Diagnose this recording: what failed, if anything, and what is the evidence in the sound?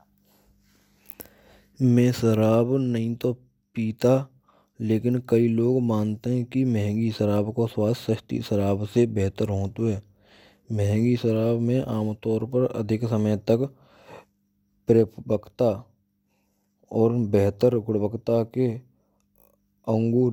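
Nothing failed: no stage from capture through playback leaves an audible trace in the speech, so there is no evidence of a fault to report.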